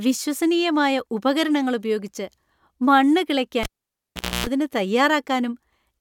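A speech clip in which, at 3.63 s, a sharp pop cuts the sound to near silence for about 0.79 s, broken by a 60 Hz hum lasting roughly 0.28 s, before a second pop brings the speech back at 4.47 s. This is a cable pulled and plugged in while live. The gap is the open connection, and the buzz is mains interference picked up while only the plug's tip made contact during reinsertion.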